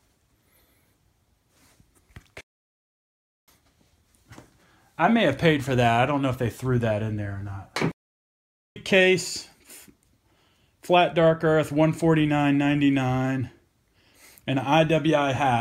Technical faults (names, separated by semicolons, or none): playback stall